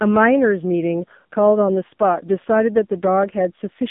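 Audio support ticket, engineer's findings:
AMR narrowband mobile codec, throughout: band 150 Hz to 3.7 kHz, heavy buzzy, synthetic speech texture, consistent with a low mode near 5.9 kbps. Artificial voicing distinguishes it from a plain telephone filter.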